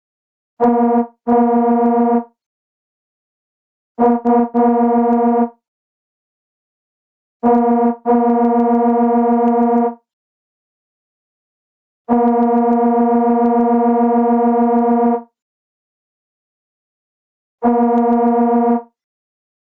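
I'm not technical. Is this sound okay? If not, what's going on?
No. Throughout the clip there is gain pumping: loud and soft parts end up closer in level, which squashes the sound. The likely cause is microphone gain set far too high, with a fast limiter pulling it back down.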